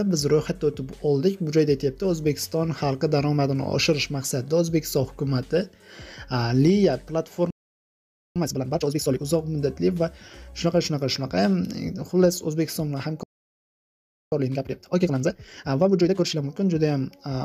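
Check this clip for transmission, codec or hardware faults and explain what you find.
Two faults recur here. A playback stall and a time-compressed catch-up each appear twice.

Playback stall, 7.50 to 8.36 s and 13.23 to 14.32 s: the audio drops to silence for about 0.85 s and then 1.09 s, likely because the player's buffer ran dry or its thread was blocked.

Time-compressed catch-up, 8.36 to 9.20 s at 2.0 times speed and 14.32 to 16.48 s at 1.5 times: the player trims its backlog by cutting and cross-fading short pieces, so the sound hurries at normal pitch.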